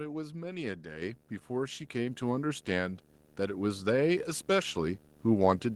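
Right from the start there's a video or display buzz at 75 Hz with hash above it, a screen or cable leaking in, sitting well under the speech. Then the microphone volume gets stepped up twice, at 1.02 s by 6 dB and at 2.07 s by 3 dB, so voice and background jump up together.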